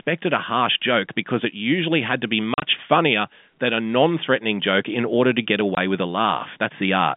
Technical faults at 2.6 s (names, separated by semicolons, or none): packet loss filled with silence